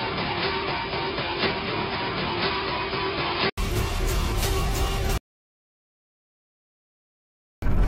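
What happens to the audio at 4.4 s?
Nothing goes wrong at 4.4 s: the audio plays straight through that moment with no dropout, click, distortion or other fault.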